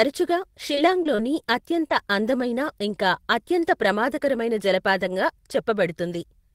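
At 0.75, 1.03, 1.15 and 1.88 s, just before "అందమైన ఇంకా అత్యంత ప్రమాదకరమైన", you get short concealed packet loss. Around 20 ms went missing each time, and the decoder stretched the previous sound over the hole, so each one comes across as a quick smear or wobble. Inside each of those spots, at 0.77, 1.05, 1.18 and 1.90 s, there's also a lost packet rebuilt from error correction. A 20 ms low-bitrate backup copy got played in its place, so you hear a rougher, noisier sliver instead of silence.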